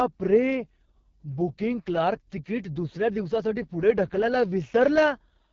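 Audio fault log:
Throughout: AMR wideband (HD Voice) codec. Heavily rough, raspy speech with nothing above 7.3 kHz fits its lowest 6.6 kbit/s rate starving the vocal-tract model.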